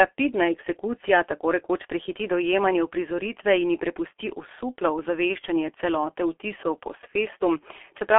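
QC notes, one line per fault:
Throughout, G.723.1 codec: the speech is confined to a telephone line band of roughly 300 Hz to 3.4 kHz, with nothing above 3.5 kHz. The result is muffled and hoarse, with smeared consonants. The heavy damage comes from a low-rate coder that rebuilds the voice from a coarse model refreshed only every 30 ms frame. Fine detail between updates is lost, and the sound points to a bitrate near 6.3 kbit/s.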